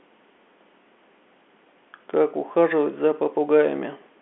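Nothing is technically wrong with this speech recording. It has the narrow sound of G.711 telephone coding, carrying roughly 250 Hz to 3.4 kHz with nothing heard above about 3.7 kHz, consistent with an ordinary A-law phone line.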